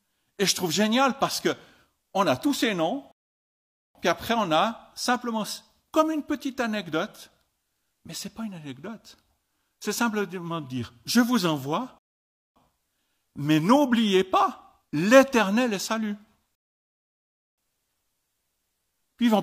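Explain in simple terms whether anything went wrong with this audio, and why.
The player ran out of downloaded audio three times and had to wait for more, a fault called a rebuffering stall. Each time, the speech stops dead and then carries on exactly where it left off: after "a tous ces noms" from 3.12 to 3.95 s, resuming with "puis après on a"; again from 11.99 to 12.56 s; and after "est salut" from 16.55 to 17.58 s. Nothing is missing, but these pauses of 0.84, 0.57 and about 1 second add dead air.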